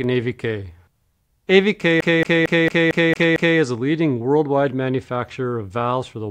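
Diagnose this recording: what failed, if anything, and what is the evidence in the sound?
The fault is at playback: the CD is stuck on one turn. From 2.01 to 3.59 s the same 226 ms slice repeats seven times, with a brief mute at each jump. A scratch keeps kicking the laser back one track per revolution.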